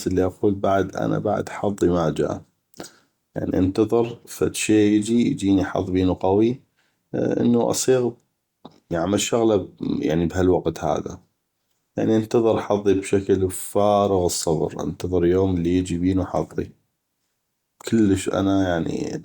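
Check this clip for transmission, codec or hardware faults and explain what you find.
No transmission, codec or hardware fault is audible anywhere in the recording.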